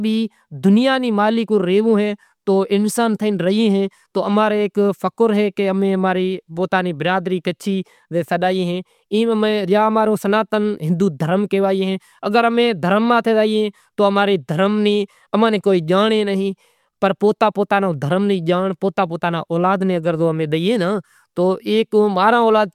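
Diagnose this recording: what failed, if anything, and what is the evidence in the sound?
Nothing failed in this recording, and there's no evidence in the sound of any fault.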